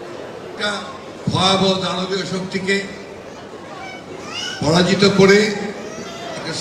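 Skip ahead at 0.57 to 0.59 s: roughly 0.7 s of audio never gets played. It was lost in transit or thrown out by an overflowing jitter buffer while later audio was already queued, so playback leaps forward with no silence inserted. The material on either side of the missing stretch is butted almost directly together, producing an abrupt jump in the sound rather than a dropout.

Jitter buffer speed-up from 0.83 to 1.72 s and again from 2.15 to 3.88 s: the receiver's buffer was holding more audio than its target, so it trimmed the excess by repeatedly cutting out short pieces one or a few pitch periods long. The first stretch runs at 104% speed, removing around 40 ms. The second runs at 109%, removing about 150 ms. The pitch stays the same while the sound moves faster, and the second stretch sounds noticeably hurried.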